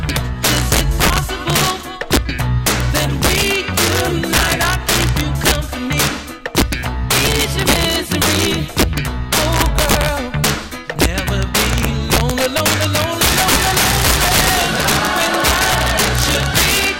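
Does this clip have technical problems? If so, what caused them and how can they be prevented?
Yes, integer overflow runs throughout: peaks driven about 9 dB too hot wrap to the opposite sign, cracking violently on a couple percent of samples. Saturate the sum or gain instead of letting it wrap.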